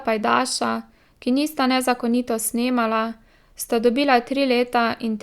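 No technical faults are audible anywhere in the speech recording.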